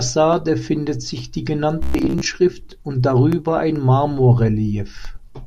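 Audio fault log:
1.83–2.26 s, robotic sound from repeated short buffers: the speech turns into a rigid metallic buzz at 66.8 Hz that still loosely tracks the words, likely because audio arrived too seldom and roughly half the time was filled by repeating a segment of about 15 ms while real audio was skipped. On a spectrogram, evenly spaced horizontal harmonics at multiples of 66.8 Hz appear. The waveform shows identical short cycles repeating every 15 ms.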